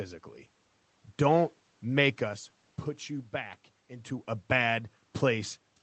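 Nothing in this speech recording points to a technical fault. The audio has come through a call path whose highs stop at 8 kHz, which fits an Opus codec at around 20 kbps, and the level changes around 2 s and 4 s are the talker moving relative to the microphone, heard against the room's own background noise.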